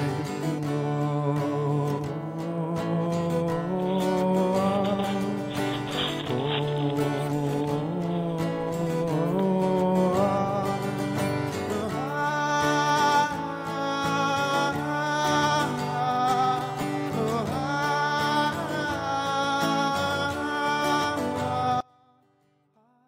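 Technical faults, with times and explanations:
21.81 to 23.07 s, one channel inverted: the sound drops by about 34 dB and stays down to the end, background included. Likely one stereo side had its polarity flipped, so everything the two sides shared cancelled in the mono sum, leaving only their small difference.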